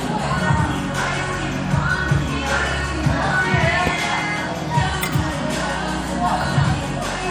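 From start to finish, the sound has a watery, swirling texture. Faint details flicker in and out, and sharp attacks smear. This is likely MP3 compression, plainly audible, fitting a low bitrate around 64 kbps.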